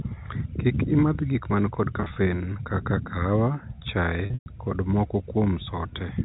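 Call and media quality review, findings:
Packet loss with pitch repetition, 2.00–2.16 s, after "imadh gik man kod", before "kaka kaawa". Brief buzzy, held tone. About 80 ms lost in scattered 20 ms gaps across 160 ms. Receiver concealment repeats the last pitch period over each gap.

Packet loss with pitch repetition, 4.26–4.46 s, before "kod moko". Held buzz decaying to silence, then cross-fade back. 160 ms lost within 200 ms, longest run 120 ms. Repetition fades out over roughly 50 ms. G.711 A-law band limit audible.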